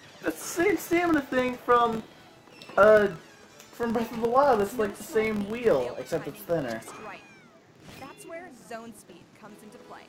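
A filter restarted on every block, losing its state each time and fitting a 1024-sample block, adds a steady 43.1 Hz buzz of ticks throughout, following the signal's level.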